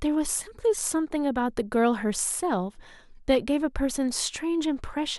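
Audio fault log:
No faults found anywhere in the speech recording.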